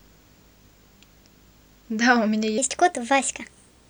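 From the start of the speech a video or display buzz runs underneath everything: a 50 Hz buzz, matching a 50 Hz picture field rate, with a grainy hash riding above it and a very high line tone at 15.6 kHz. It sits roughly 35 dB below the speech, low but constant. It comes from a screen or video cable leaking its scanning signals into the audio path, so the interference follows the picture timing rather than anything in the recording.

At 2.58 s the last section, running to the end of the clip, is at the wrong speed. It plays 1.24 times too fast, so the speech suddenly turns hurried and rises by about four semitones, with pitch and tempo jumping together at the join. The likely cause is that this portion was replayed or conformed against the wrong clock, so its samples were consumed faster than they were captured. The buzz continues underneath it.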